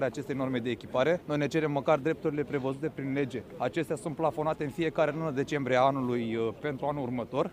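No technical faults can be heard anywhere in this clip. There is nothing to place on the timeline and nothing that calls for a fix.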